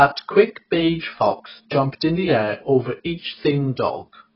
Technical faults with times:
0.00-4.35 AAC compression

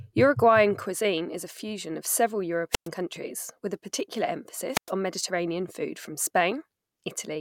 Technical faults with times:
2.71-2.88 wireless microphone squelch dropout
4.72-4.91 wireless microphone squelch dropout

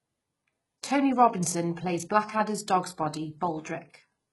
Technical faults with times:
0.00-4.33 HE-AAC compression

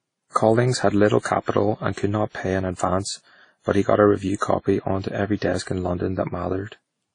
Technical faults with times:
0.00-7.14 transcoding between lossy codecs

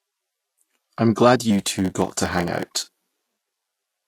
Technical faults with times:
0.00-4.08 Vorbis compression
1.50-4.08 block size mismatch (padded)

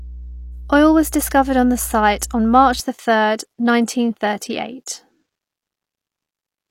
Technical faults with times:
0.00-2.80 mains hum

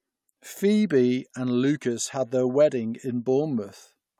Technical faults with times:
none

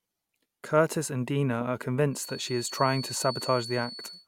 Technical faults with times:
2.09-4.27 feedback whistle

